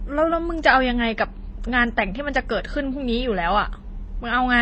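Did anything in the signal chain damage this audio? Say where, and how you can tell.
Yes, at the codec stage, throughout the speech. Two layers of smeared artefacts over a dull top end suggest transcoding between lossy codecs, likely low-rate MP3 re-encoded as HE-AAC.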